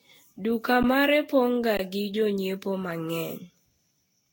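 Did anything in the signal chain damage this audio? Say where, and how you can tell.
Yes. At the codec stage, the sound is swirly, smeared and hollow throughout, attacks are blurred, and nothing remains above 16.6 kHz. That points to generation loss, likely from around ten Vorbis passes near 60 kbit/s, with each re-encode on a shifted frame grid compounding the holes, unlike a single low-bitrate encode.

At the driver or buffer stage, the waveform freezes flat at 0.83 s (about 12 ms) and from 1.77 to 1.79 s (20 ms). This is an underrun with held sample: the converter held its last value rather than dropping to zero, so the sound stops with little or no click. Playback resumes where it stopped with nothing lost, unlike a dropout that cuts audio.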